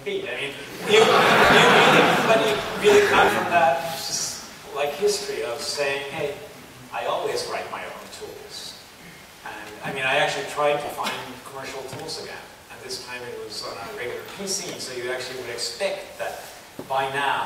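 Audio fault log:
1.45–1.50 s, 3.08–3.28 s, 8.28–8.36 s, 10.85–10.93 s, 13.67–13.72 s: lost LE Audio frames. Gaps run 50 to 130 ms, which fits 10 ms frames. The LC3 decoder repeats the last spectrum with random signs. Tones smear into noise. At 3.08 s, losses scatter over 200 ms.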